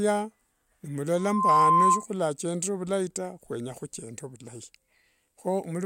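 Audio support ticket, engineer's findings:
Loudspeaker feedback squeal, 1.17–2.06 s: single 1 kHz tone swelling over roughly a third of a second to well above the speech. Mic–speaker loop gain exceeding one. Pure, growing tone, not broadband hum or noise.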